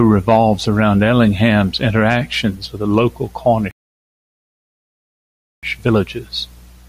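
It's a speech clip with a single rebuffering stall. Right after "interactions with the local", at 3.71 s, the audio drops to silence and stays there until 5.63 s, then picks up exactly where it left off. The player simply ran dry of downloaded audio and waited for more to arrive. Nothing gets skipped, but that gap adds 1.92 s of dead air to the clip's running time.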